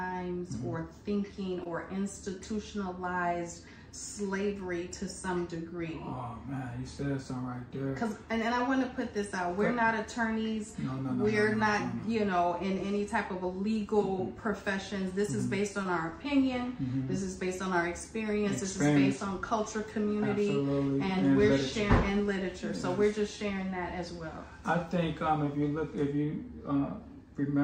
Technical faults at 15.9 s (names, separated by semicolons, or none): short concealed packet loss